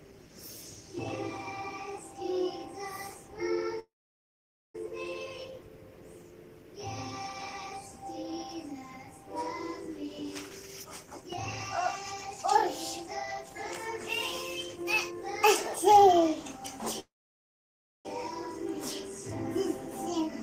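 At 3.79 s there's a call audio freeze: about 0.95 s where the sound stalls and drops to near silence, likely held-up packets starving the jitter buffer, then resumes with nothing lost. Between 10.02 and 16.80 s comes a jitter buffer speed-up in five bursts (10.02–11.29 s, 11.79–12.56 s, 13.04–13.56 s, 14.76–15.23 s, 15.85–16.80 s). The receiver trims pitch periods to shed the built-up delay, so the audio runs 8 to 30 percent fast at unchanged pitch and sounds hurried. A second freeze follows at 17.00–18.07 s, a roughly 1.05 s stall with about 0.97 s of near silence, again with nothing missing.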